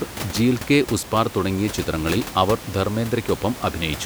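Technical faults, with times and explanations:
No technical faults are present in this speech clip.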